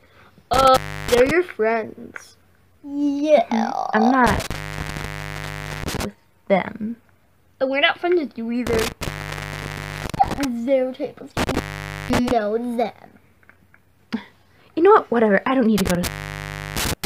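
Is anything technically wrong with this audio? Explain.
Yes. The audio suffers from an intermittent contact, most likely a loose cable or plug, which drops out five times: at 0.54 to 1.31 s, 4.27 to 6.05 s, 8.67 to 10.45 s, 11.37 to 12.31 s, and 15.78 to 17.06 s. During each event the connection breaks for between about 0.32 s and 1.32 s. The signal vanishes outright, with crackle where the contact breaks and remakes, and faint hiss remains while the line is open.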